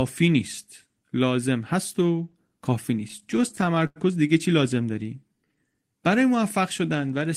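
Between 2.99 and 3.98 s, packets kept arriving late and the jitter buffer ran dry over and over, giving repeated stalls (stutter). The receiver stretched the last sound across 15 gaps, the longest 91 ms, adding 221 ms in all. Nothing is lost, but about a fifth of that stretch is filler, so the speech drags and hiccups.

At 5.28 to 5.53 s, a jitter buffer slow-down sets in as the buffer rebuilds its reserve by repeating single pitch periods. This adds 45 ms, and the speech runs at 85% speed at unchanged pitch, sounding briefly drawn out.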